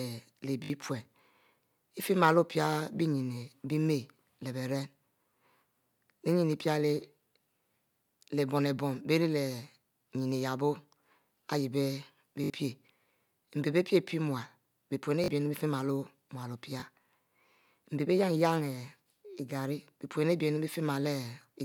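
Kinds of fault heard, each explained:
Repeated buffer: at 0.64, 12.44, 15.24 and 16.8 s, fresh audio arrived late, so a slice fitting a 20 ms buffer replays, causing brief buzzy stutters.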